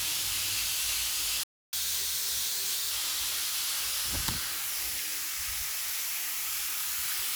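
A recording of everyday sounds with a playback stall: at 1.43 s the audio cuts to silence for about 295 ms, resuming at 1.73 s, most likely because the player's buffer ran dry or its playback thread was briefly blocked. Immediately afterwards comes catch-up at higher speed: from 1.73 to 2.91 s the backlog is resampled at 1.25 times normal rate, so the sound runs fast and sits roughly four semitones sharp until the lost time is recovered and normal speed and pitch return.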